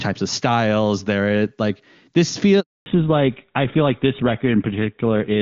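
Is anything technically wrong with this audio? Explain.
Yes, there are two faults. At 2.60 s, just after "styles there like this", a handover gap silences the speech for about 260 ms until 2.86 s: no frames arrived while the call switched networks, so that audio is lost. From 2.86 s to the end, a fallback to narrowband removes everything above 4 kHz. The clear HD Voice wideband sound before the switch gives way to duller, rougher speech that fits an older codec such as GSM full rate.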